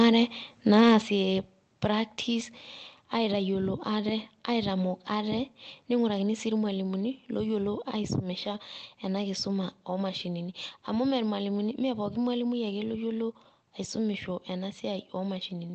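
At 1.02 s the speech drops suddenly by about 6 dB. This is a microphone volume stepped down, likely from call software lowering the input gain in one step.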